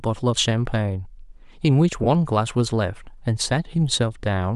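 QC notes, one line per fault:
2.04–2.07 s, lost LE Audio frames: about 20 ms of speech drops out and is replaced by a brief noisy smear. The decoder covers the gap by reusing the last spectrum with random signs. This keeps the energy going but scrambles the harmonic pattern, so the speech turns hissy for an instant. The gap fits two 10 ms frames of an LC3 stream. The loss is short, so it never fades toward silence.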